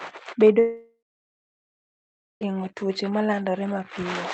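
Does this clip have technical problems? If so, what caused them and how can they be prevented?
Yes. A long network dropout runs from 0.59 s to 2.43 s. The sound breaks off, the receiver stretches the last moment into a fading buzz, and then about 1.4 s of near-silence follows. When the audio resumes, roughly 1.8 s of the original is gone rather than delayed. The likely cause is a burst of lost packets: the jitter buffer had nothing to play, and concealment could only cover the first fraction of the gap. A steadier connection, such as wired Ethernet instead of congested Wi-Fi, together with forward error correction, would prevent it.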